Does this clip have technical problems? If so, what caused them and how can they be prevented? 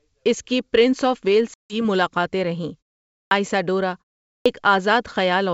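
Yes. Packet loss on the ADPCM call comes at 1.54 to 1.76 s, just after "کی پرنس آف ویلس": about 160 ms of speech, a handful of packets, drops to hard silence. The decoder's predictor and step size then lose sync with the sender's, so the sound returns slightly distorted before settling. A jitter buffer with packet-loss concealment and redundancy such as FEC would prevent it.

Clipped starts after a pause occur at 3.24 s, where roughly 72 ms is swallowed after a half-second silence, and at 4.39 s, where about 66 ms is lost after a 0.44 s pause. The output device sleeps during silence and needs time to wake, so each onset begins abruptly without its first sounds. Keeping the audio device active through pauses, or feeding it low-level padding, would prevent this.

The G.722 coding at 64 kbit/s adds at most a faint hiss above 4 kHz.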